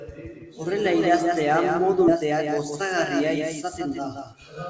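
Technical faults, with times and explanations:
Throughout: doubled audio track. A second, full-band copy of the speech trails the original by about 200 ms at roughly 5 dB lower, with no decay or room colour. That separates it from a reverberant echo. The likely cause is a second capture through a slower path.
2.08 s: skip ahead. Playback jumps forward with no fill, and roughly a second of speech is missing. The two sides are butted together almost directly, so this is an abrupt loss rather than a dropout with silence or concealment noise.
2.22–4.67 s: jitter buffer speed-up. After the jump, the receiver trims short pitch-period pieces repeatedly, about 150 ms in all. The speech runs about 5% fast at unchanged pitch and sounds hurried, which is unlike a resampling error that would also raise pitch.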